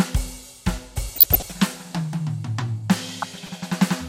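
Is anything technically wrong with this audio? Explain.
Yes. DAB burbling occurs from 1.16 to 1.52 s and again from 3.13 to 3.50 s. Weak reception lets a fraction of a percent of bit errors slip past error correction into the MP2 data. Corrupted samples put short blips of noise in single sub-bands, and corrupted scale factors make sub-bands jump in level for up to a frame, over the music.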